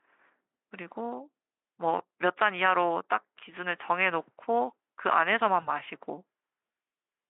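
At 5.61 to 5.68 s, 20 ms of audio went missing, which fits one lost packet. The Speex decoder's VoIP packet loss concealment extrapolated the gap into a brief, fading smear.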